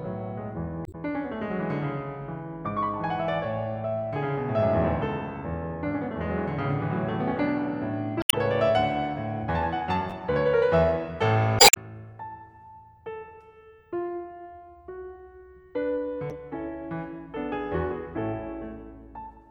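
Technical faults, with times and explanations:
0.83–0.95 s, 8.19–8.34 s, 11.56–11.77 s and 16.27–16.32 s, damaged data in a compressed stream: brief squawks or blips break into the music. Corrupted bytes made the decoder misread frames, lose sync and skip ahead to the next valid frame header.
10.10–10.12 s, chunks out of order: a tiny jumbled flicker in the music. One chunk of about 11.6 ms played one chunk late, after the chunk meant to follow it. Nothing is lost, but the swapped order creates three abrupt, mismatched joins.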